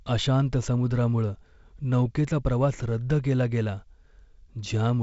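No faults in the speech; the G.722 wideband coding runs at 48 kbit/s with only light codec damage and nothing above 7.7 kHz.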